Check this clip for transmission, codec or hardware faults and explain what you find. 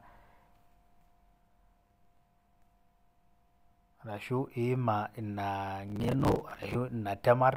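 Processor overload crackle at 1.80–2.19 s and 5.88–6.75 s: buffers of around 10 ms miss their deadlines and are refilled with stale audio, producing gritty, hard-edged crackle over the speech.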